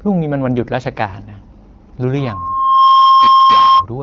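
At 2.16 s a loudspeaker feedback squeal kicks in: the mic is picking up the speaker it feeds, and at around 1.1 kHz the loop gain tips past one, so that tone feeds on itself. It swells over well under a second into a steady whistle sitting roughly 15 dB above the speech, and it runs until about 3.86 s. The speech underneath has the slightly band-limited HD Voice character of AMR wideband.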